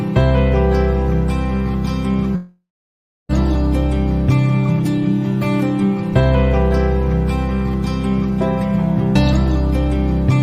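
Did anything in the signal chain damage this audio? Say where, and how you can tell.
Yes. From 2.35 to 3.31 s the sound smears into a fading buzz, falls silent for 0.65 s, then resumes with material missing. This is likely a long network dropout, not a brief concealed packet loss.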